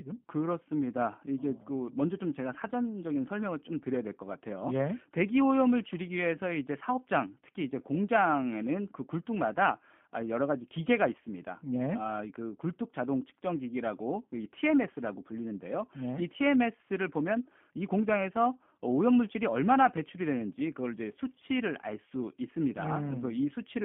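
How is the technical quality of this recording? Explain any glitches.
The recording is narrowband and codec-damaged throughout. Throughout the speech, G.729 coding, which fits 8 kbit/s, rebuilds each frame from a filter and sparse pulses, adding rough, synthetic buzz. This sets it apart from a plain phone-band limit between 150 Hz and 3.4 kHz.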